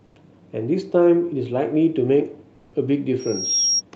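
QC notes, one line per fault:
0.05–0.15 s and 2.55–2.73 s, comfort noise in place of the background: during these pauses the faint background, about 36 dB below the loud parts, turns into flat, featureless hiss about 4 dB and 2 dB quieter, likely Opus DTX stopping transmission and the receiver synthesising fill noise.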